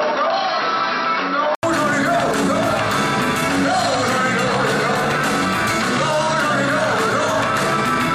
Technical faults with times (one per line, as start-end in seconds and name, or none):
0.00-1.63 input switched to a poorer device